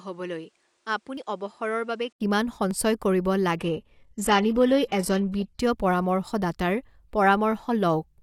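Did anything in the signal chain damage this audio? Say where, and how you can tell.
Yes. From 0.0 to 2.2 s the sound is duller, about 10 dB quieter, with a noise floor about 40 dB down. An 80 ms silence precedes the brighter sound. On a spectrogram the top band appears abruptly. This is likely an input switched to a poorer device at the driver stage.

Two jumps in the sound, at 1.17 s and 2.71 s, lose roughly 70 ms and 20 ms respectively without any silence. The waveform shows a sharp discontinuity where two separated stretches are butted together. The likely cause is a dropped buffer (overrun) in the driver or buffer stage.

From 3.59 to 5.59 s the network delivered an adaptive stream at a lower bitrate. Codec artefacts rise, which points to a drop from roughly 96 kbit/s AAC-LC to 16 kbit/s HE-AAC. A spectrogram shows a flat ceiling and smeared highs, with no gap.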